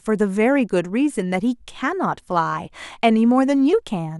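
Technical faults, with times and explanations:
No technical fault can be heard anywhere in this speech recording. Nothing in the sound points to a problem at any moment.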